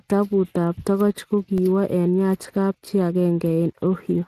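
A speech clip with Speex codec damage throughout. The coding artefacts are plainly audible, giving the voice a noisy, hoarse edge. This comes from CELP coding with too few bits for the excitation, and fits a Speex stream near 22 kbps. Nothing is present above 15.2 kHz. At 1.58 s there is a block of digital silence, about 2.4 ms long. The signal drops to zero and returns with no fade. The hard edges produce a brief tick. A likely cause is an output buffer that was not filled in time.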